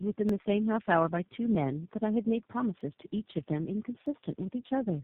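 This is a speech clip that has clearly been through tandem speech coding: it sounds rough, muffled and a bit warbly, with nothing above about 3.8 kHz. That points to roughly four speech coders in a row, something like a G.729A, iLBC and CVSD hop with G.711 legs between them, each one re-encoding the already damaged output of the last. On top of that, from 0.29 s to 4.06 s there's a regular click about every 1.26 s, so around four of them in all. That's likely clock drift buffer slips. Two devices with clocks off by something like a tenth of a percent would make the buffer between them drop or repeat a few dozen samples each time it runs over or under.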